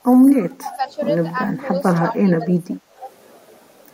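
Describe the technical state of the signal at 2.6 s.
Speech suppressed in double talk covers 2.0 to 2.76 s, so 2.6 s falls inside it. The talker drops away by around 20 dB across roughly half a second, likely because the echo canceller could not separate the talker from the far side's loudspeaker echo and attenuated both.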